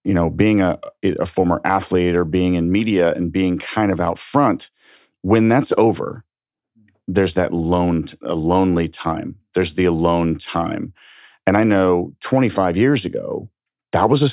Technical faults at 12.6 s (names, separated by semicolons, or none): none